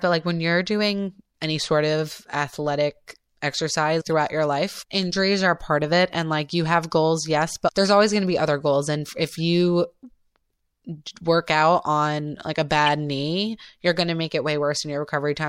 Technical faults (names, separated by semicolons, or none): corrupt frame decoded